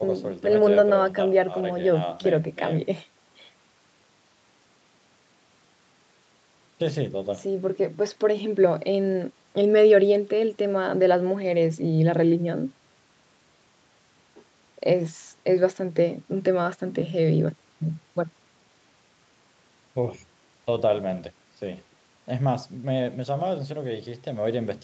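Speech with no technical faults to report. The sound stops at about 8 kHz, which fits a wideband call codec at a moderate bitrate on a normally working call path.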